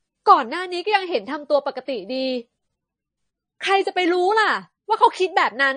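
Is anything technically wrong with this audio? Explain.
Yes. Likely MP3 compression, throughout: nothing above 9.4 kHz, with plainly audible watery swirling, because the encoder drops weak frequency lines, which fits a low bitrate around 30 kbps.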